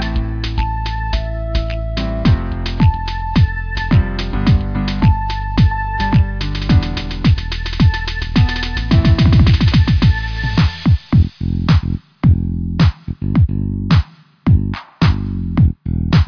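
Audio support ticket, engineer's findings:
No faults found on listening: signal path shows no dropouts, level problems or distortion that would need a component-level fix.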